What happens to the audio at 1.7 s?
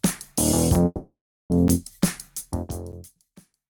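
At 1.68 s the output buffer likely wasn't filled in time, leaving a block of digital silence about 12 ms long, which fits a 512-sample buffer, heard as a tick.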